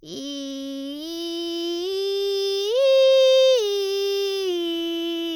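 No technical faults are audible.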